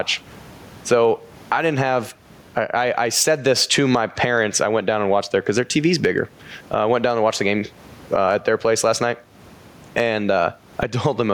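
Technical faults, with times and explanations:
Throughout, gain pumping: the gain swings by around 20 dB under the speech, with the room noise sitting about 41 dB below the speech. This is likely a fast limiter or compressor fighting input gain set far too high.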